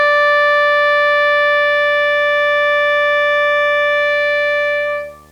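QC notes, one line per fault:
Throughout, video or display buzz: a steady buzz at 75 Hz sits under the music, with a gritty hash riding above it, roughly 30 dB below the music. The 75 Hz rate matches a display refreshing 75 times a second, so the picture signal, or a screen or video cable near the audio path, is coupling its field-rate pulses into the audio, and the sharp edges of those pulses produce the hash above the fundamental.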